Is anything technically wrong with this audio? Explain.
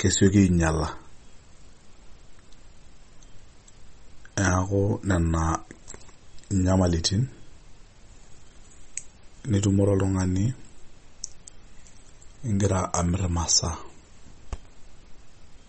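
Yes. MP3 compression artefacts run through the whole speech clip, likely from low-bitrate MP3 encoding, which fits about 32 kbps. Nothing is left above 8.4 kHz, and weak frequency lines drop in and out between frames, giving a plainly audible watery, swirly texture with metallic chirps on s sounds.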